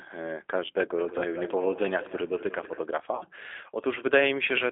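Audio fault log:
throughout, G.729 codec: The speech sounds thin, slightly rough and synthetic, with nothing below 300 Hz or above 3.5 kHz, and the coding damage is plainly audible. This points to an 8 kbit/s G.729A stream, which rebuilds each 10 ms frame from a vocal tract filter, a pitch predictor and a few pulses.
1.18 to 1.33 s and 3.15 to 3.25 s, VoIP packet loss concealed by the speech codec: The speech briefly smears into a buzzy tone or coloured noise that fades, then stays weak or distorted before it recovers. The decoder covered a 20 ms gap and then a 60 ms gap, which fits one and then three lost packets, by extending its last pitch and filter at falling gain.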